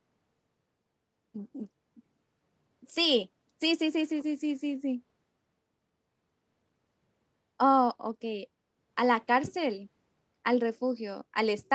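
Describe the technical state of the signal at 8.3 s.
At 8.3 s the speech is intact, with no dropout, glitch or distortion, only the steady 8 kHz band limit of the call path.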